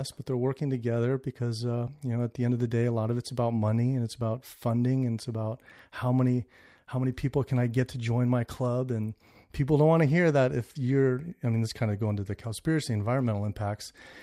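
No technical faults are audible anywhere in this recording.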